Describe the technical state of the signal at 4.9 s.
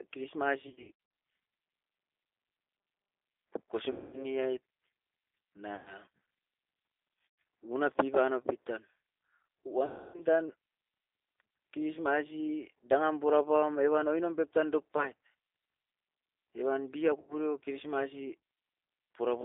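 At 4.9 s, as throughout, G.729 codec damage: speech rebuilt from a filter and sparse pulses, consistent with about 8 kbit/s, sounds rough and synthetic, unlike plain 300 Hz–3.6 kHz band-limiting.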